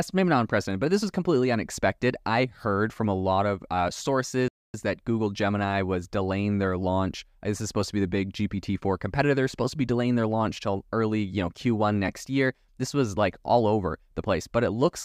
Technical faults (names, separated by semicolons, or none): playback stall